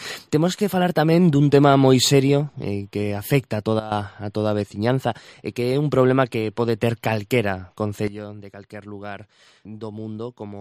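At 3.80 s the level drops abruptly by about 13 dB, with the background falling along with the sound, then snaps back at 3.92 s. A second step down of about 12 dB arrives at 8.08 s and holds to the end. Both are sudden gain jumps: the level changes between adjacent samples with no ramp, most likely because a gain setting or bit shift was applied instantly in the digital path.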